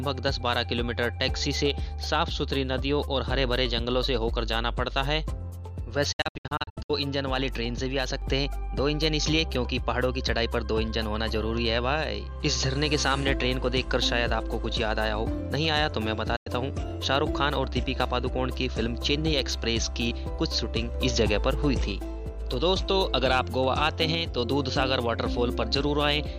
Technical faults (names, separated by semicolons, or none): digital broadcast dropout